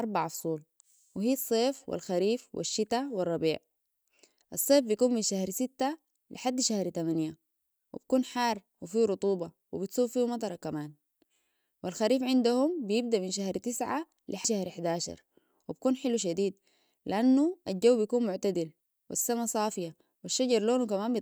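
Speech recording with no audible technical faults.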